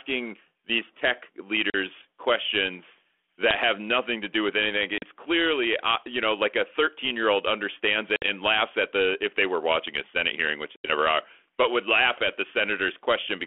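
Packet loss on an ADPCM call breaks this speech at 1.7, 4.98, 8.16 and 10.76 s, each a hard-edged silent gap of 40, 40, 60 and 80 ms, roughly two to four packets. Afterwards the decoder's predictor and step size are out of step with the sender's, so speech returns slightly distorted until they resynchronise.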